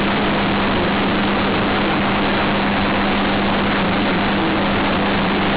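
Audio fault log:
throughout, companded audio read as linear: the speech is very loud and harshly buzzy, with heavy noise filling the pauses. Mu-law bytes are played as plain linear 8-bit samples without expansion, so each sign change swings across half the range and quiet passages match loud ones.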